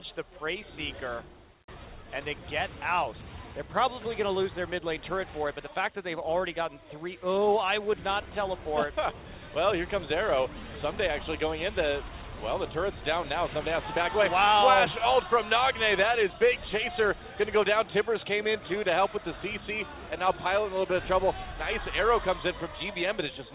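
No faults can be heard anywhere in this clip.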